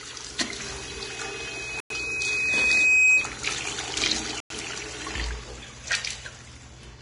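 Throughout the recording the sound is hissy and grainy, with a hard ceiling at 10.6 kHz, and the likely cause is heavy Vorbis compression at a rate around 33 kbps. At that rate the encoder keeps only a smooth outline of the spectrum and quantises the upper bands so coarsely that their detail turns into noise of similar energy. On a spectrogram everything above 10.6 kHz is empty, and the treble below it looks blotchy and speckled instead of continuous.

From 0.58 s to 3.37 s a loudspeaker feedback squeal rises at 2.5 kHz. A microphone picked up the speaker it was feeding, and at that frequency the loop gain exceeded one, so the tone kept feeding itself. It swells over roughly two seconds until it sits about 15 dB above the surrounding sound. A spectrogram shows a single bright horizontal line at 2.5 kHz that thickens and brightens as it builds. On the waveform the envelope grows steadily.

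At 1.80 s, inside the squeal, and again at 4.40 s, there is a gap between chunks. The sound cuts out for 100 ms and then resumes exactly where it stopped, so nothing is lost. The audio was delivered in 2.5 s pieces, and silence was inserted at each join. The waveform drops to a flat line with sharp edges. On the spectrogram each gap is a narrow blank vertical stripe running across all frequencies, and the two stripes are 2.6 s apart.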